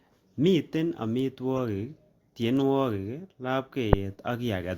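Word clock ticks run through this speech recording from 0.51 s to 4.63 s: sharp clicks at a steady rate of about one every 0.7 s, roughly seven in all. They come from a digital link read by a device running on its own clock rather than locked to the sender's. The two clocks drift apart by something like 30 parts per million, and each time they slip past each other a single sample is dropped or repeated, producing a tick. Corrupt frame decoded faults appear as short bursts at 1.57–1.59 s, 2.60–2.62 s and 3.93 s. Their error peaks are about -30 dBFS for the first, about -25 dBFS for the second, and close to 0 dBFS for the last, which makes the final burst a loud, harsh blip. Each one points to a compressed frame, or a pair of frames, whose bits were damaged but which the decoder played anyway. The misread gains and codes put energy at the wrong frequencies for roughly the length of the damaged frames, so each is heard as a brief chirp or noise burst.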